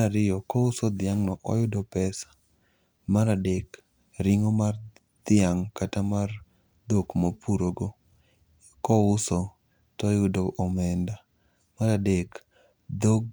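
Listening through the speech, nothing stood out as a technical problem at any point.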